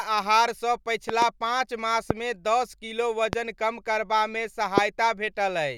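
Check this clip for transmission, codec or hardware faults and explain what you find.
There are loud pops in this speech clip: a quick double pop between 1.09 and 1.24 s, then single ones at 2.11–2.13, 3.33–3.35 and 4.78–4.80 s. Each is a sharp click or thump sitting well above the speech, roughly 15 to 25 dB louder, with the last the hardest. The speech carries straight on underneath. The likely cause is a brief voltage spike from a connector, switch, static discharge or driver glitch, shaped by the downstream circuitry into that short burst.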